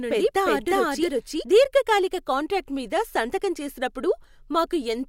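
Until 1.44 s, a doubled audio track, likely from a slower second path, echoes the speech about 0.4 s late at equal level. Repeated waveform shapes stop abruptly before "దీర్ఘకాలిక కాంట్రాక్టు మీద సంతకం".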